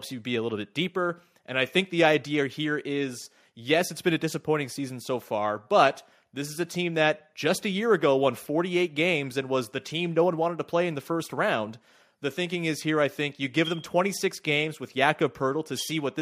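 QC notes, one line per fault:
Nothing stood out on listening to this speech clip.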